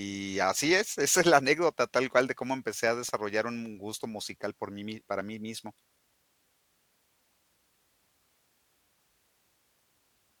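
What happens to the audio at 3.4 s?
At 3.4 s the speech is inside a run of CD scratch ticks lasting from 2.66 to 3.51 s. Five short ticks fall in that span, about six per second, the longest about 0.7 ms. A blemish on the disc passes under the laser once per revolution and corrupts more data than error correction can rebuild, so the player interpolates or mutes those samples. The result is a regular, rhythmic clicking over the speech.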